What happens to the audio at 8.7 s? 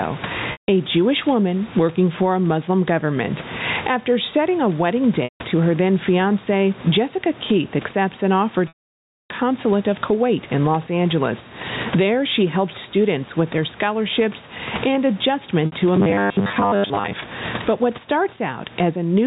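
At 8.68 s the speech freezes into a short buzzy, held tone that quickly fades into silence. The silence lasts until 9.30 s, when the speech comes back with a brief cross-fade. This is packet loss with pitch repetition. About 620 ms of audio went missing, and the receiver bridged the start of the gap by repeating the last pitch period, fading it out over roughly 50 ms. Because the loss is so long, most of it is heard as a dropout.

Under that, the level is being squashed, with gain swings of around 20 dB. This is gain pumping, likely from input gain set far too high with a fast limiter or compressor pulling it back on every loud sound, so loud and soft parts sit unnaturally close in level.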